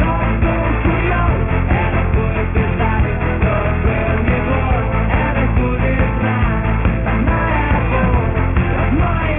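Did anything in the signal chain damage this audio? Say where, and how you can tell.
Yes. A sample-rate conversion stage did the damage. The audio was resampled downward without an anti-aliasing filter, which fits a drop from 44.1 kHz to a 6 kHz rate. Everything above the new 3 kHz limit folds back into the band as aliasing, landing at unrelated frequencies. It runs throughout the clip: high-frequency content turns gritty and metallic, the spectrum runs hard up to the 3 kHz edge, and the folded energy sits roughly 15 dB below the wanted signal.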